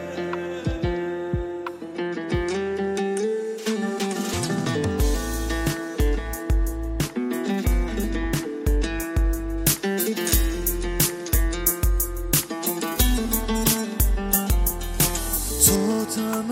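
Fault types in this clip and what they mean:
Pre-emphasis left on: from about 9.58 to 15.76 s the treble boost applied before recording or transmission never got its matching cut, so highs sit about 13 dB up at 10 kHz against 1 kHz, which fits the 75 µs FM curve, leaving things thin, bright and hissy-sibilant.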